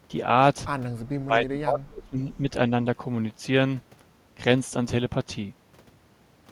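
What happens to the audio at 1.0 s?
From 1.03 to 2.19 s the speech is suppressed in double talk: it is pulled down by up to about 30 dB for roughly a second in total, likely because the echo canceller took the talker for loudspeaker echo while both sides spoke. Unlike a network dropout, it is gain reduction on the talker rather than lost audio.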